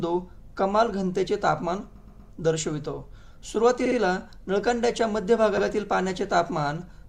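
At 1.95 s, 3.85 s and 5.57 s the audio stutters from repeated frames: a short compressed block replays instead of advancing. A 120 ms block plays three extra times, then 60 ms twice, then 80 ms once, adding 360, 120 and 80 ms.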